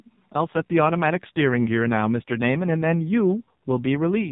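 Thin, band-limited and buzzy throughout, the speech has a synthetic, heavily coded quality characteristic of the AMR narrowband mobile codec, which cuts everything above 4 kHz; the damage fits a low rate near 5.9 kbps.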